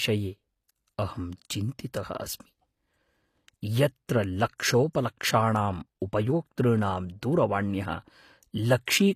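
From start to finish, the s sounds come out gritty and lisping, with a metallic sheen on the upper range of the speech, and nothing at all above 15 kHz. The likely cause is HE-AAC compression at a rate that fits roughly 24 kbps: only the lower spectrum is coded, and the treble is rebuilt by copying lower bands upward under a coarse envelope, so its harmonics fail to line up with the real ones.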